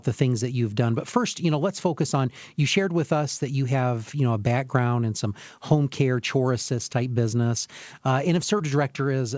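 Speech over a call line, with a brief smear or wobble in the sound from about 8.58 to 8.61 s, just after "type business uh and". This is short concealed packet loss. About 20 ms of audio failed to reach the decoder in time, and the receiver covered roughly 14 ms of that gap by extending the preceding sound before crossfading back into the real signal. The band stops at 8 kHz, which fits the G.722 codec at 64 kbps on this call path.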